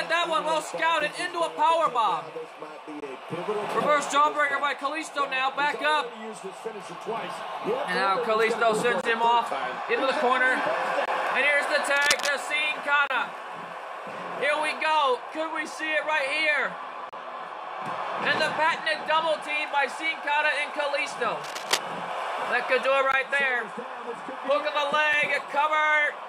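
Short holes of silence with hard edges cut into the sound at 1.0, 3.00–3.02, 9.01–9.04, 11.06–11.08, 13.07–13.10, 17.09–17.13, 23.12 and 25.13 s. This is a gap between stream segments. Each hole sits on a 2-second segment boundary, where the timestamps leave a small space that the player fills with silence. The holes last from about 4 ms up to 33 ms. Unlike a dropout, nothing is missing. The sound simply resumes a moment later.

From 11.96 to 12.29 s, and again from 21.41 to 21.79 s, dense, uneven scratching rides over the sound. This is cable scratch noise, likely from a worn cable or connector being moved so that its contact resistance jumps rapidly. The first burst is roughly as loud as the sound itself, and the second is a little quieter. Steady hiss or regular crackle continues evenly, but these bursts come in short, rustling episodes.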